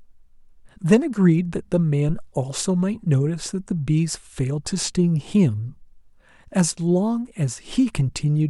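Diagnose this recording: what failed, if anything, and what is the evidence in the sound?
A phantom power thump at 2.09 to 2.32 s in the speech points to the analogue input stage. A deep, low-frequency thump rises to about -19 dBFS and dies away with a decay time of roughly 52 ms. This is the signature of a supply being switched on or off while the input was live: the sudden voltage step passes through the coupling capacitors and reaches the preamp as one pulse.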